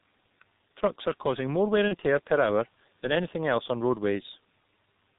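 Throughout, the speech carries G.723.1 codec damage: muffled, hoarse and smeared, consistent with a 6.3 kbit/s stream, with the spectrogram empty above 4 kHz and consonant bursts blurred.

From 1.88 to 1.95 s, VoIP packet loss concealed by the speech codec, which fits one lost 30 ms frame, produces a brief stretched sound that fades. It appears as a shrinking waveform envelope.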